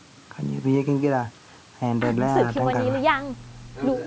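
From 2.41 s to the end at 4.06 s there's mains hum, a steady 60 Hz drone sitting roughly 20 dB under the speech. Power-line current is leaking into the signal path, probably through a ground loop or a nearby transformer.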